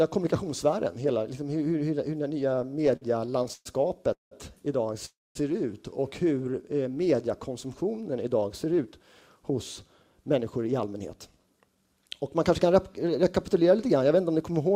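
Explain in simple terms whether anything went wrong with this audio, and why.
Repeated stalls (stutter) run from 2.51 to 3.67 s. The sound keeps catching and holding: there are 16 short breaks, the longest 122 ms, and together they fill about a quarter of that stretch. Each time, the incoming audio had run dry, so the receiver stretched out the last bit of sound until more arrived. Nothing is actually lost, but the sound drags and stutters.

A call audio freeze happens twice, at 4.13 to 4.33 s and at 5.05 to 5.37 s. The sound briefly carries on, then goes silent for about 0.15 s the first time and 0.21 s the second. It then resumes exactly where it stopped, so about 0.18 s and 0.3 s of gap get inserted without anything being skipped. The likely cause is audio data being held up on its way, leaving the receiver with nothing to play.

A jitter buffer slow-down occurs from 6.38 to 7.17 s. 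The sound plays at about 89% speed with its pitch unchanged, so sounds come out drawn out. The receiver was low on stored audio and built up a reserve by repeating tiny slices of the sound, adding 94 ms in total.

A jitter buffer speed-up covers 8.78 to 13.71 s. The sound runs at about 108% speed, again at the same pitch, and feels a little hurried. Too much audio had piled up waiting to be played, so the receiver trimmed tiny slices out again and again, cutting roughly 0.4 s to bring the delay back down.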